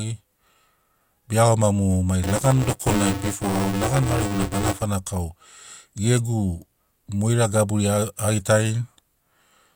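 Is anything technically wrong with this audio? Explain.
Yes. Buffer tearing runs from 2.23 to 4.82 s. The program filling the playback ring buffer and the hardware reading it have drifted out of step, so they cross inside each period. In every buffer, somewhere around two-fifths of the speech is stale, replayed from roughly 15 ms earlier, with an abrupt splice at each edge. These repeating seams cycle at 200 Hz, a 5 ms period, and produce a rough robotic buzz under the speech that lasts only while sound is present.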